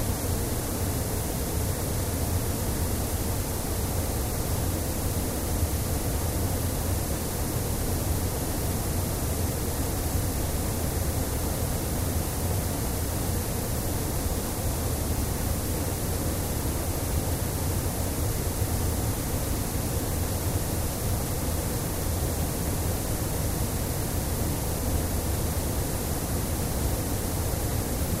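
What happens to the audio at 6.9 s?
Nothing goes wrong at 6.9 s; the sound carries straight through that moment intact, with no dropout, click or other fault.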